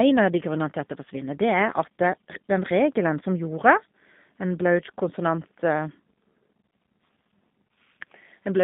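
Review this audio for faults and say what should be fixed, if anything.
Throughout the speech, G.729 codec damage is plainly audible. The sound is confined to a narrow line band of about 150 Hz to 3.6 kHz, and the voice has a rough, slightly synthetic buzz. The coder rebuilds each 10 ms frame from a vocal-tract filter, a pitch predictor and a few pulses rather than the original waveform, which fits an 8 kbit/s G.729A stream. A plain telephone band filter would remove the same highs and lows but leave the voice smooth, so the synthetic texture is what identifies the codec. To prevent this, carry the call on a wideband codec such as G.722 or Opus.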